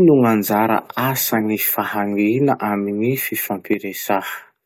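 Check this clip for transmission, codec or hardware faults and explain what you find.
One fault turns up near the end of the speech. From 3.74 to 4.08 s, about a third of a second, the level drops abruptly by about 6 dB and then returns. This is likely one channel drops out: a stereo channel vanishes briefly, halving the shared mono sum.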